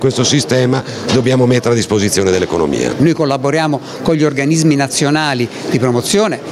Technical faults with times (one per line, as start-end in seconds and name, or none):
0.00-6.51 gain pumping